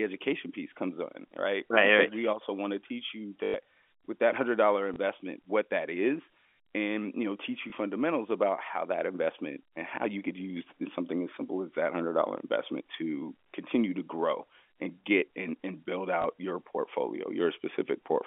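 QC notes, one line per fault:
3.44–3.54 s, packet loss with last packet repeated: between "want to teach you" and "with that hundred dollar" a brief robotic stutter buzzes at about 50 Hz. About 100 ms went missing, consistent with five 20 ms packets, and the receiver looped the last one, out of step with the pitch.
4.94 s, 7.70 s, 16.22 s, packet loss with last packet repeated: single small blips, after "with that hundred dollar" and after "you know teach you". Each is one lost 20 ms stretch filled by repeating the previous packet, heard through the narrow telephone band of the G.711 line.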